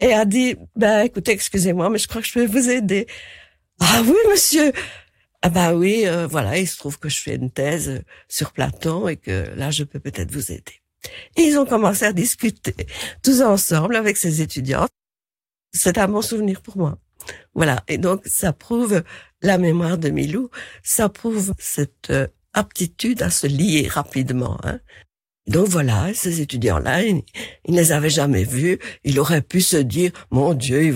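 At 24.47 s the speech jumps, as though a sliver of sound has been skipped and the two sides butted together with no gap of silence between them. That behaviour marks a dropped buffer (overrun), and the likely cause is that the recording software failed to collect its samples before the audio hardware overwrote them, losing about 20 ms of the speech and joining what came before directly to what came after.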